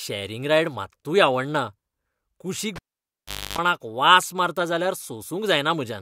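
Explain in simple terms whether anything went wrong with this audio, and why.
Something did go wrong: at 2.76 seconds the speech stops with a sharp pop and drops to near silence for about 0.78 seconds. Toward the end of that gap comes a rough buzz lasting about 0.28 seconds, and a second pop brings the speech back by 3.58 seconds. This is a cable pulled and plugged in while live. Pulling it causes the first pop. While only the plug's tip touches as it goes back in, the line picks up 50 Hz mains buzz until full contact restores the sound.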